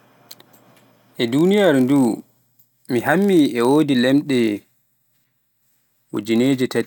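Speech with a block size mismatch (padded) running throughout: each block the next stage reads is a fraction short, and the missing samples are filled with zeros, leaving a tiny gap every block. These gaps repeat at 46.9 Hz, which fits a 1024-sample read block, giving a low buzz under the speech. The overall slowdown is only 0.999 times normal speed, at essentially unchanged pitch. A waveform would show regularly spaced brief dropouts, and a spectrogram faint vertical lines with harmonic stripes at multiples of 46.9 Hz.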